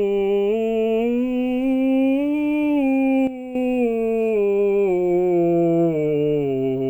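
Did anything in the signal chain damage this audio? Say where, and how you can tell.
Yes: a sudden gain jump, likely an unramped digital gain change, drops the music and its noise floor together by about 10 dB from 3.27 to 3.55 s.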